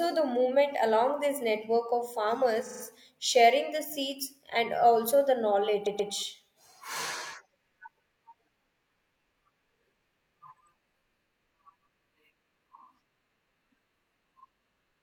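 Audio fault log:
2.62–2.80 s, repeated frames: a 42.7 ms block, fitting a single compressed frame, replays four extra times, adding 170.7 ms of stutter; the spectrogram shows identical slices with seams.
5.82–6.08 s, repeated frames: a 128 ms block, fitting three frames, plays twice more, adding 256 ms; the waveform shows the same shape copied back-to-back, heard as a stutter.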